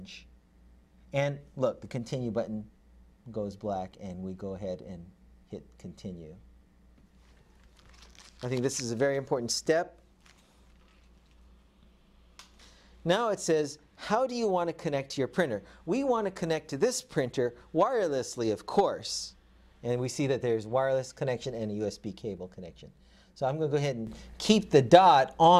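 The audio carries a sudden gain jump at 24.07 s: the level steps up by about 9 dB from one sample to the next and stays there through the end of the clip, with the background noise rising along with the wanted sound. This is likely a digital gain change applied without a ramp. On a waveform the envelope widens abruptly at that point, and a spectrogram shows every band brightening together along a sharp vertical boundary.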